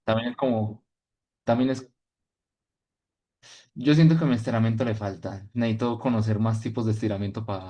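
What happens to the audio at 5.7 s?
Nothing goes wrong at 5.7 s; the speech carries on without any dropout, click or distortion at that moment.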